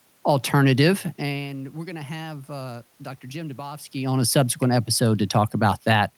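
No technical faults can be heard in the speech. There is background noise from the room, and the talker's level shifts at about 1 s and again near 4 s as they move relative to the microphone.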